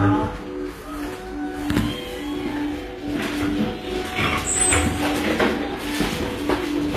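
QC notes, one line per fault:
Throughout, HE-AAC compression: the treble sounds gritty and metallic, with nothing above 14.9 kHz. It was likely rebuilt from copied lower bands at a low bitrate near 24 kbps.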